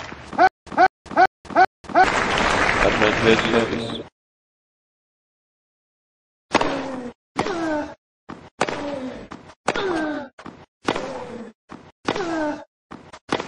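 Throughout, the audio sounds watery and swirly, with metallic chirps on sharp high sounds, likely from MP3 compression at a low bitrate around 40 kbps. Unlike a simple low-pass filter, the missing detail flickers from moment to moment.

From 0.47 to 2.04 s there is stutter with silent gaps: a 198 ms burst repeats four times, each followed by 193 ms of digital silence, giving an even 391 ms cycle. This is likely a stalled stream replaying its last fragment. Unlike a click or dropout, the same fragment returns in a regular rhythm.

At 10.81 s comes pre-echo: a hiss about 28 dB above the quiet background fills the 37 ms before a sharp attack, which sounds softened. The smear fits a 52 ms transform block with no switch to short blocks, and unlike reverb, the noise arrives before the attack.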